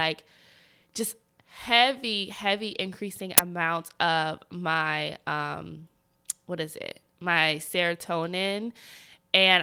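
At 3.38 s the speech is cut by a single uninitialised buffer. For about 11.6 ms, playback reads a block that was never filled with audio. Whatever leftover data sat in that memory is sent out as if it were sound. The result is a sharp, very loud crack of digital noise with no link to the speech around it. The length of the burst fits one 512-sample buffer.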